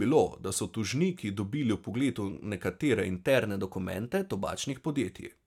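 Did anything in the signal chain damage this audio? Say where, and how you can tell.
Yes. A drift correction step, likely in buffer clock matching. From 3.27 to 4.71 s, speech runs 6% fast and 101 cents sharp, then snaps back.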